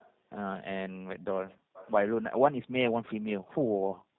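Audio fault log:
Throughout: tandem speech coding. The speech sounds rough, muffled and warbly, with nothing above 3.8 kHz. It passed through two speech codecs in a row, ending in G.729A, and each one recoded the losses left by the one before.
1.47–1.57 s and 1.73–1.91 s: echo leak. Faint scraps of the speech return about 332 ms late, roughly 20 to 25 dB below the direct sound. They were likely left by a loudspeaker-side echo canceller that failed to remove everything its microphone picked up.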